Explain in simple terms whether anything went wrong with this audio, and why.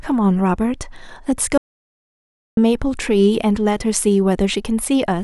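Yes. From 1.58 to 2.57 s there is an audio dropout to silence: the speech stops abruptly and the gap is dead quiet, with no background room sound. The input was likely lost briefly, so about one second of speech is gone.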